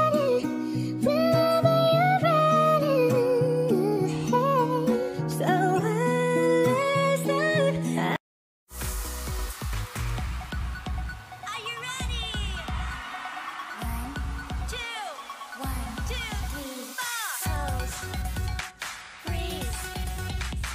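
No technical faults are audible.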